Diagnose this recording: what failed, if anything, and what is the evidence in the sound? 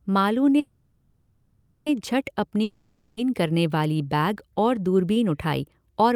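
At 0.59 s the speech stops moving forward and the last sound is drawn out as a fading buzz until 1.88 s, a call audio freeze of about 1.27 s. The stage is the network, with the likely cause being delayed packets draining the jitter buffer. Nothing is lost: the speech resumes where it halted, now running 1.27 s late. On a spectrogram the final harmonics smear into flat horizontal bands that thin out. The waveform shows a decaying, repetitive envelope.

From 2.63 s to 3.19 s there is a long network dropout. Again the last sound is stretched into a fading hiss, but after about 0.54 s the speech comes back further on, just before "करने वाली", with that 0.54 s of speech missing. The likely cause is packets that never arrived, so concealment filled the gap. On a waveform the smooth, dying fill ends in an abrupt jump. On a spectrogram the formant pattern is discontinuous where speech resumes.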